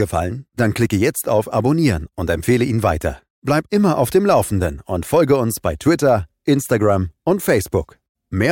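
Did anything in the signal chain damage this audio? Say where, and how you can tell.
No, nothing in the signal chain has left audible damage on this speech recording. I can't point to any stage, from capture through to playback, where the sound gives evidence of harm.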